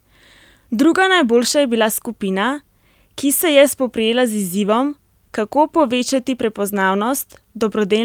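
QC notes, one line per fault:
Nothing to flag here; the speech comes across without a single technical problem worth a line.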